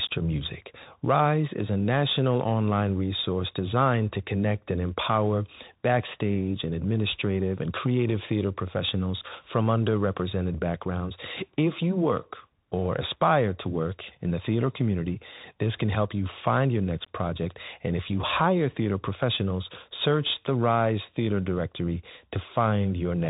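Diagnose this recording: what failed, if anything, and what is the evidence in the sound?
Bluetooth CVSD headset codec damage runs throughout the speech at the codec stage. Nothing passes above about 3.8 kHz, and the plainly audible granular hiss and scratchy s sounds fit a 64 kbps one-bit delta coder whose adaptive step can't track fast, loud high-frequency movement.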